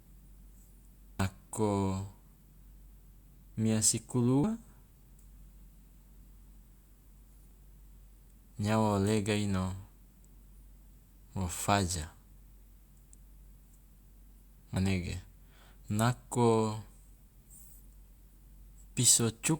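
At 1.20, 4.44, 7.51 and 14.76 s the speech jumps ahead, losing roughly 0.3, 0.1, 0.3 and 0.1 s, likely dropped buffers from an overrun.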